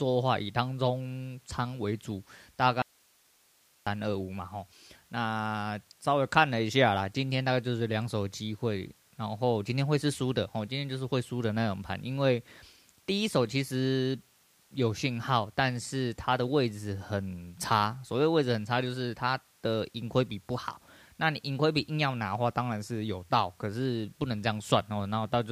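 The signal path most likely lost its source for a moment while the stages after the break stayed live. That is an audio dropout to a faint residue. From 2.82 s to 3.87 s, a little over a second, the speech cuts out abruptly in mid-flow. Only hiss fills the gap, sitting roughly 35 dB below the normal level. The speech then snaps back just as suddenly, with no fade either side, so it is not a natural pause.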